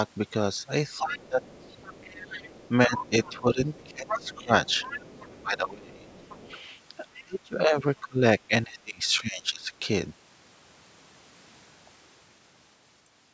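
From 0.98 to 5.42 s a faint second voice, roughly 20 dB below the talker, runs underneath. This is likely the other side's voice leaking through: loudspeaker echo that the canceller failed to remove from the microphone. Inside that stretch the talker drops sharply and briefly from 0.99 to 1.42 s and fades in pieces for about a second between 2.22 and 4.51 s, and just after it dips deeply from 5.42 to 6.09 s. This is speech suppressed in double talk, likely the canceller turning both voices down because it could not separate the talker from the echo. Quieter scraps of the leaking voice return at 6.09 to 6.6 s and 7.14 to 7.23 s. From 7.18 to 9.71 s the talker again sinks deeply and intermittently, for about a second and a half in total.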